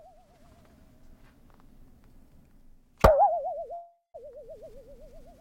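At 3.73 to 4.16 s a call audio freeze stretches the last sound into a fading buzz, then about 170 ms of silence, likely from delayed packets draining the jitter buffer; playback resumes about 0.41 s late with nothing lost.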